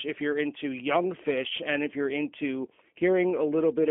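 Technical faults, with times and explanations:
Throughout, G.729 codec: the speech sounds thin, slightly rough and synthetic, and the damage is plainly audible. Nothing below 200 Hz or above 3.4 kHz comes through, which gives it a boxed-in telephone quality. At 8 kbit/s the codec doesn't send the waveform. It sends a vocal-tract filter, a pitch predictor and a few pulses every 10 ms frame, and rebuilding the speech from that coarse model leaves a rough, artificial grain on the voice.
1.48 to 1.51 s, VoIP packet loss concealed by the speech codec: for a moment the speech smears into a brief stretched sound that fades, and then recovers with a weak or distorted onset. About 20 ms of audio never arrived, which fits a single lost packet. The decoder filled the gap by repeating its last pitch and filter settings at falling gain. Each frame depends on the one before it, so the frames just after the gap also sound off.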